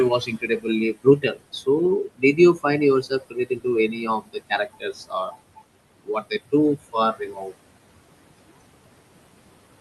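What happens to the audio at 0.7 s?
The opening speech sounds swallowed and faint up to 0.7 s, from 0.26 s: speech cut by the noise suppressor, which mistook it for noise and lowered it by up to about 18 dB. Under that, the background pumps, sinking by about 21 dB between phrases. These are noise suppressor artifacts from frame-by-frame band gating.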